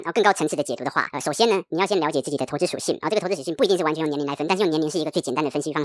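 Throughout, a wrong sample rate plays the speech 1.5 times fast, about 7 semitones high, as if 16 kHz audio ran at 24 kHz; spectrogram formants sit higher.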